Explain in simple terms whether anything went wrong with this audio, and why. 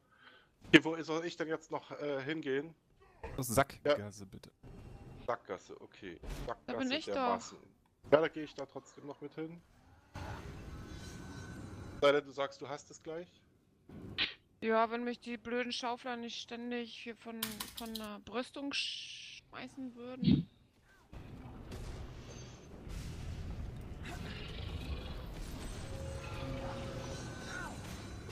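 Nothing went wrong here that you'd notice, since the sound carries on smoothly without any glitches, dropouts or odd noises along the way.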